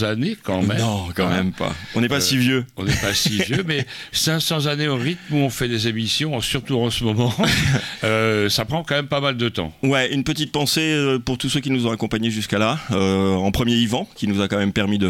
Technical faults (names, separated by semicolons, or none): none